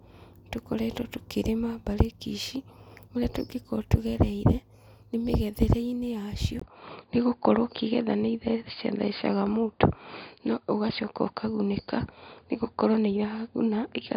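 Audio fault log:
6.60 to 14.17 s, input switched to a poorer device: after a brief 20 ms gap the speech goes dull and boxy with nothing above 4.8 kHz, the level shifts by around 5 dB and faint new background noise appears, likely from a jump to a narrower-band microphone.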